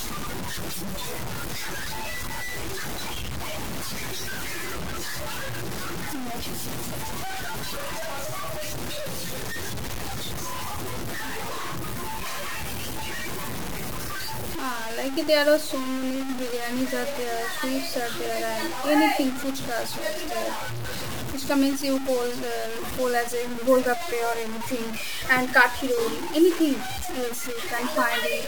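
From start to finish, the speech carries grainy distortion that shifts with every syllable. This is low bit depth without dither. The sound was likely truncated to about 5 bits. The error sits roughly 10 dB below the signal. Quiet passages turn gritty.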